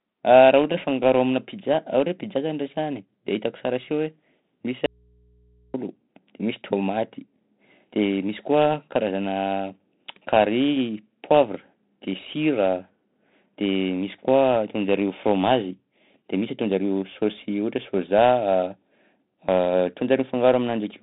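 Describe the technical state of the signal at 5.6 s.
At 5.6 s the signal is inside an audio dropout to a faint residue running from 4.86 to 5.74 s, about 0.88 s. The wanted sound is likely lost upstream while the later path stays live, leaving only mains hum about 35 dB down. The waveform collapses abruptly to a thin low-level band, and the spectrogram shows bare hum lines.

The 4-bit ADPCM compression across the whole clip is heavy, which fits a 32 kbps stream. A coarse predictive step adds gritty, level-following hiss, and the spectrogram is empty above 3.9 kHz.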